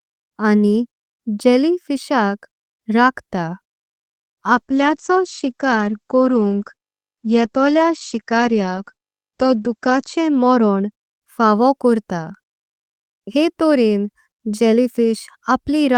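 From 4.56 to 10.97 s, a call bitrate drop makes the Opus coding coarse and watery for about 5.5 s at its worst, consistent with a fall from 40 to 10 kbps. On a spectrogram, the speech's upper edge sinks from 12 kHz to 8 kHz.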